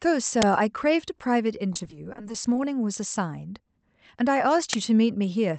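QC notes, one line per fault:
0.42 s and 4.73 s: uninitialised buffer. Single 10 ms blasts of loud digital noise from stale memory played as samples.
1.73 to 2.58 s: repeated packet loss (robotic sound). Dropouts of up to 20 ms recur, each patched by stretching the previous sound, so about a third is concealed, giving choppy sound rather than one clean gap.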